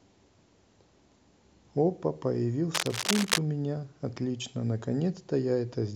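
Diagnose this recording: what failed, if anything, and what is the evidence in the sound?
The failure is in the analogue wiring. From 2.74 to 3.39 s, dense, uneven bursts of cable scratch noise rustle over the speech, roughly as loud as the voice itself. The likely cause is a worn cable or connector being moved, its contact resistance fluctuating rapidly.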